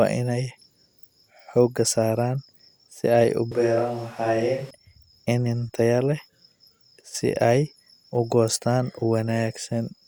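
After "ay u", from 3.52 to 4.70 s the speech turns suddenly hollow, roomy and thin at the same loudness, unlike a gain dip. That points to a likely switch to a distant microphone.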